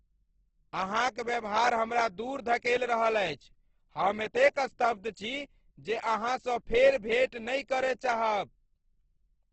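Throughout, the speech carries heavy Opus compression damage: grainy, rough, noise-filled tones from bands rebuilt by folding or noise. Nothing sits above 8.2 kHz, likely a low-rate encode near 12 kbps. A spectrogram shows a flat ceiling there and speckled, smeared harmonics below.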